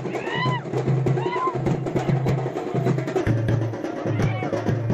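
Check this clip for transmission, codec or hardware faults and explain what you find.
Two faults are audible: a burst of DAB burbling and a closing section played too slowly.

From 1.57 to 2.32 s, DAB burbling appears. Weak reception let bit errors, around half a percent, slip past error correction into the MP2 data across what sounds like dozens of frames. Corrupted samples put short blips of noise into individual sub-bands, and corrupted scale factors make sub-bands leap in level, giving short noise blips and level jumps over the sound.

From 3.21 s to the end, the section runs at the wrong speed. This is likely from playback or editing against a mismatched clock, running at 0.856 times the correct rate. Because speed and pitch move together, the sound drops about three semitones and drags slower.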